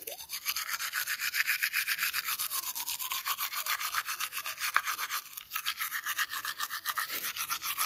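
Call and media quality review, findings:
No audible faults found in the signal path: level, continuity and bandwidth of the everyday sound in this recording show nothing that needs a ticket.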